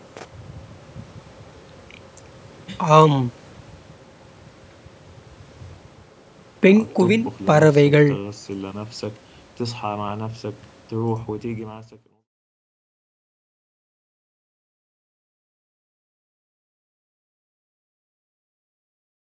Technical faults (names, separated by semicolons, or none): none